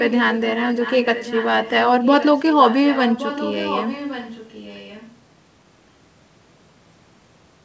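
From 0.0 to 5.17 s, an echo leak: the speech returns 1.12 s later and much quieter, likely loudspeaker pickup the canceller missed. It is a distinct repeat, not reverb's smear.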